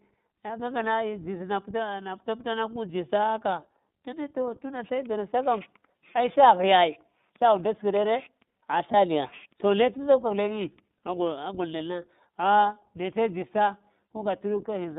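iLBC codec throughout: the speech is squeezed into roughly 150 Hz to 3.7 kHz, with plainly audible rough, synthetic coding from 20 ms frames, which fits the 15.2 kbps mode.

Lost iLBC frames at 8.92 to 8.95 s: the decoder covers the gap, consistent with one lost frame, by repeating the last pitch cycle, giving a brief buzzy held sound before speech recovers immediately.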